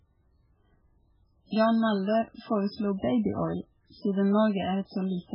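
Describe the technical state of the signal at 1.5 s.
At 1.5 s you're hearing heavy MP3 compression, which runs through the whole clip. Nothing gets above 5.2 kHz, so the speech sounds dull and watery, with a swirly, chirpy edge where weak detail flickers in and out. That likely points to a starved bitrate, something like 8 kbps.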